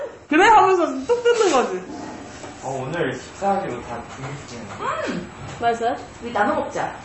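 MP3 compression throughout: the audio stops dead at 8 kHz and sounds watery, likely from an encoder starved of bits, which fits a bitrate around 32 kbps.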